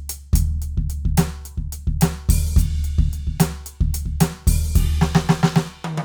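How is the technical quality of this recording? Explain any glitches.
Nothing stood out on listening to this music recording; no glitches were heard.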